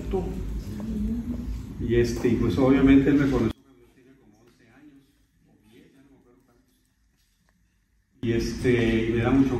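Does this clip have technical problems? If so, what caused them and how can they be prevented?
Yes. From 3.51 to 8.23 s the sound drops by about 32 dB to a faint remnant, likely one channel inverted, cancelling the shared content in the mono sum. Checking each channel's polarity and listening in mono before export would catch this.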